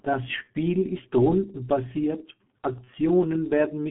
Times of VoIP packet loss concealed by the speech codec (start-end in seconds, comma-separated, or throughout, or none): 0.44-0.49, 2.84-2.90